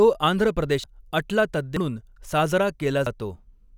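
A short speech clip with three abrupt skips, at 0.84, 1.77 and 3.07 seconds. Each is a jump with the sound skipping forward, losing roughly a third, a fifth and a tenth of a second. That's likely a dropped buffer (overrun), with chunks overwritten before capture.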